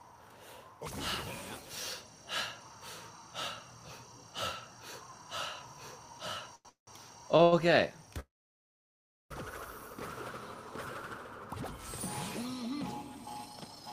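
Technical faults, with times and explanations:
6.55–6.67 s, 7.37–7.41 s and 7.43–7.54 s: short stall from a late packet. The jitter buffer ran empty, so the last sound is held for 94, 19 and 88 ms, then resumes with nothing lost. These stretches are too brief to fade out, which sets them apart from a freeze.
6.69–6.89 s and 8.20–9.32 s: call audio freeze, likely from packets held up in transit. The final sound buzzes and fades into about 130 ms and about 1.03 s of silence, then continues where it stopped.
13.47–13.84 s: jitter buffer speed-up. Roughly 40 ms of pitch periods are trimmed away, so the audio runs at 110% speed with unchanged pitch. It sounds hurried rather than held or silent.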